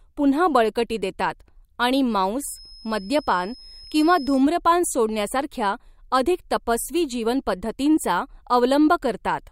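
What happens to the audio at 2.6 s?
A feedback whistle sits under the speech at that point. It runs from 2.42 s to 4.45 s, starting after "पुन्हा बळकटी देतात आणि" and clearing before "सोडण्यासारख्या अधिक तपस्वी". A thin, steady tone near 5.2 kHz hangs behind the speech, roughly 25 dB below it, swelling and fading slowly in level. The likely cause is a loudspeaker-to-microphone loop held just at the edge of feedback. One frequency keeps ringing without building up.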